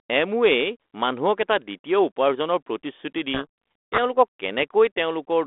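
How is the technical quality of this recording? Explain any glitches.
The sound travels over a narrowband telephone path, G.726 ADPCM at 32 kbit/s passing roughly 250 Hz to 3.5 kHz, and one glitch breaks through it.

From 3.34 to 3.99 s there is a codec payload misread. The decoder takes G.726 code words in the wrong bit order, so the speech is buried in harsh distortion. On a spectrogram the band fills with dense smear, and the waveform turns jagged.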